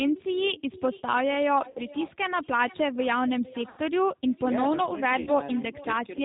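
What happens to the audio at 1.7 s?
VoIP packet loss concealed by the speech codec from 1.70 to 1.79 s. About 60 ms of packets, likely two, went missing, and the decoder extrapolated its last pitch and filter at falling gain, leaving a brief fading buzzy or noisy smear. This sits on G.729 coding that is plainly rough and band-limited to 4 kHz, with an echo with no canceller returning about half a second later at about 20 dB below the speech.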